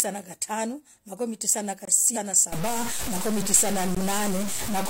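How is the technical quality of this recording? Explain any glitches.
Technical quality is poor. The speech has a couple of dropouts, a skip, and distortion through most of the second half.

Block of digital silence: just after "tisah na", from 1.85 to 1.88 s, about 23 ms drops to silence, which fits an unfilled 1024-sample buffer. You hear a tiny hole.

A second, shorter hole of about 17 ms lands at 3.95 s and is also heard as a short hole.

Stream segment skipped: at 2.12 to 2.17 s, again after "tisah na", the speech jumps forward with a small blip, likely a stream segment that failed to load before playback moved on.

Stuck bit: from 2.52 s to the end, the sound turns distorted, with noise filling the gaps. That's likely one data bit stuck, pushing roughly half the sample values off.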